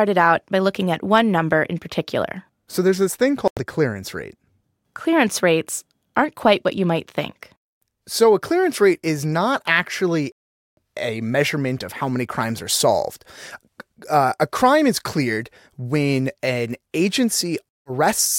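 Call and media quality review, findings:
Bluetooth stall, three dropouts in the speech. Silence at 3.48–3.59 s (92 ms), 10.32–10.77 s (452 ms) and 17.69–17.91 s (167 ms). The audio resumes after each gap. The likely cause is interference delaying packets. The headphone buffer runs dry, and playback waits for the retransmissions.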